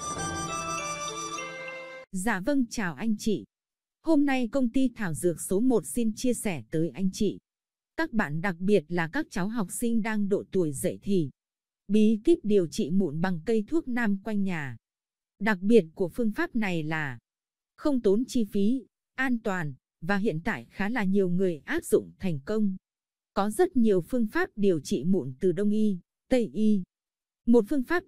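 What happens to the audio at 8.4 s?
Nothing goes wrong at 8.4 s; the audio runs through that moment without any dropout, click, distortion or other fault.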